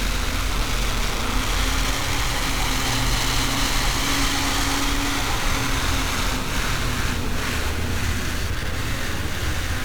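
From start to finish the audio has gone through 1-bit DFPWM compression, which keeps just one bit per sample and uses it only to push an adaptive level up or down. The damage here is heavy, consistent with a rate near 48 kbps. The coarse tracking leaves dense broadband quantisation noise, so the sound turns fuzzy and crackly throughout, and its upper detail, extending to about 21.6 kHz, is dulled or swamped by hiss.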